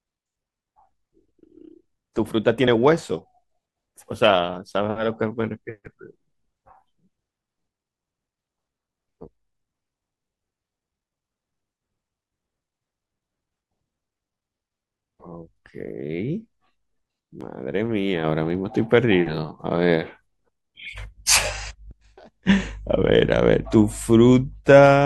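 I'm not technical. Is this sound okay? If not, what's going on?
No. There are two short glitches, at about 2.67 s and again at 17.41 s. Both come from damaged data in a compressed stream. Speech like this is stored in a squeezed, compressed form, and a small patch of that stored data got corrupted. When playback reaches the bad spot, the decoder can't read it properly and briefly loses its place. Each time you hear a tiny chirp or blip, lasting only a split second.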